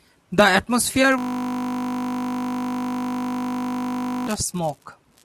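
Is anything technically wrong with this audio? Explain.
Yes. From 1.18 s to 4.27 s the speech stops and a steady buzz at 50 Hz takes over. It comes from a system hang loop: the computer or driver froze while the audio hardware kept replaying one 20 ms piece of its ring buffer, over and over, about 150 times.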